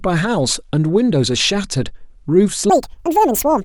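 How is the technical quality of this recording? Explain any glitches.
The recording has one clear fault, a section at the wrong speed. From 2.70 s to the end at 3.64 s, the speech plays back 1.79 times too fast, likely because that segment was clocked at the wrong rate. Speed and pitch rise together, about ten semitones higher, so the closing speech sounds sudden, hurried and squeaky.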